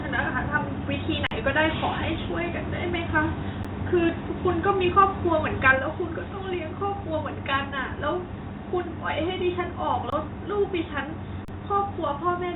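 The first underrun with held sample comes at 1.27 to 1.31 s. The output buffer ran dry for about 46 ms, which fits a 2048-sample buffer, and the converter froze on its last value. The sound stops abruptly. On the waveform it shows as a flat horizontal line, and on the spectrogram as a blank vertical band. Roughly 50 ms of live audio was lost. A shorter one follows at 3.63 s, only about 12 ms long, consistent with a 512-sample buffer, with around 10 ms missing.

Microphone overload, the likely cause of the harsh crackle, appears at 4.97 to 5.03 s and again at 5.66 to 5.71 s. The peaks were driven about 2 dB and then about 3 dB past the converter's ceiling. Roughly 2% and then roughly 5% of samples in those spans have their tops sheared off. The waveform shows flattened plateaus at the converter's limit. On the spectrogram, the clipping adds smeared energy across the band, up to the 4 kHz ceiling of the G.711 call path.

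At 5.79 s the microphone volume stepped down by about 4 dB, likely the call software reacting to that second clipped peak. The sound and the background noise drop together in a single instant, with no fade. On the waveform, the envelope shrinks abruptly to a visibly smaller height from that point onward. On the spectrogram, every band darkens at once, including the noise floor between phrases.

Two more underruns with held sample follow. At 10.10 to 10.12 s the flat held level lasts about 23 ms, pointing to a 1024-sample buffer, and about 20 ms of sound is lost. At 11.45 to 11.48 s the hold runs about 35 ms, with roughly 40 ms missing. Both show the same flat held segment and empty spectrogram slice as the earlier ones.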